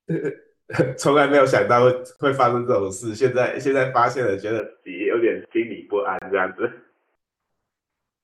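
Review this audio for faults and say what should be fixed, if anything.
Two gaps between stream segments cut the speech. The first runs from 2.16 to 2.19 s, about 32 ms. The second runs from 6.19 to 6.22 s, about 28 ms. Each is a hard-edged hole of silence. The segment time stamps don't line up, so the player pads the space with nothing. No speech is lost, but the timing stretches slightly. The four-second spacing fits 4-second segments. Prevention: stamp each segment to start exactly where the last one ends.

From 4.60 to 7.15 s the speech turns dull and boxy. Nothing above 3.2 kHz survives, and then the full band returns. There is no silence at either edge, and the level barely changes. A faint new noise floor appears, roughly 50 dB below the speech. The likely cause is an input switched to a poorer device, such as a headset call profile, in mid-recording. Prevention: lock the input device for the whole session.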